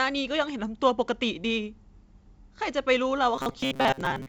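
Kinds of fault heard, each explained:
Robotic sound from repeated short buffers: from 3.36 s to the end at 4.28 s, the speech turns into a stiff, metallic buzz at 134 Hz that still loosely follows the words. The likely cause is audio arriving too seldom, so playback keeps looping a chunk of about 7.5 ms. That loop length is what sets the 134 Hz buzz, and roughly half the real audio is lost. The wideband G.722 sound, topping out near 7 kHz, carries on underneath.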